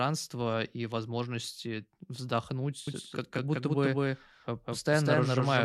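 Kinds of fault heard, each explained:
Doubled audio track: from 2.88 s to the end, a second full-band copy at roughly equal level trails about a fifth of a second behind, likely from a slower capture path, showing as shifted repeated spectrogram patterns.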